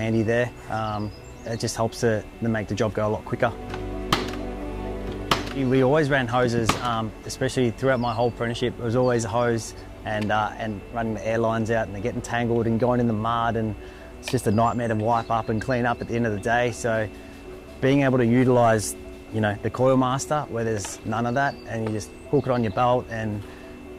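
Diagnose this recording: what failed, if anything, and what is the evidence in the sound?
Nothing failed, and there is no evidence in the sound of any fault at any stage.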